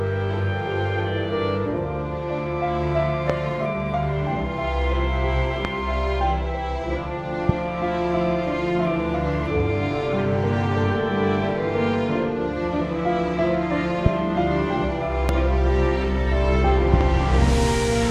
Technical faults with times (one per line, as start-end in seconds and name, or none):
3.30-3.32 loud pop
5.65-5.67 loud pop
7.49-7.52 loud pop
14.06-14.09 loud pop
15.29-15.31 loud pop
16.94-17.03 loud pop